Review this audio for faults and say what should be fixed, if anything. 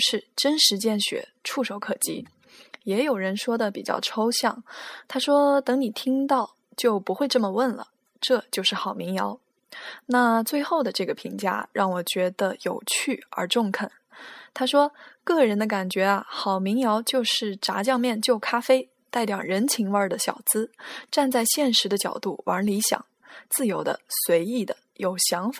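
Nothing here needs fixing: I couldn't hear a single fault in this speech recording, so there's nothing to repair or guard against.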